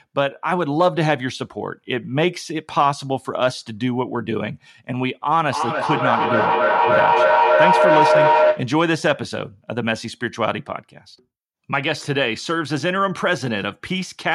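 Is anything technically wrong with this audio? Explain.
Yes. From 5.51 to 8.79 s the speech is overtaken by a feedback howl. A tone around 700 Hz builds up and peaks at about 5 dB above the speech. It pulses roughly every third of a second. Sound from a loudspeaker is reaching a microphone on the same call and being sent back out louder each time. The loop favours that one frequency, so it grows instead of dying away. The pulsing marks the loop's round-trip delay.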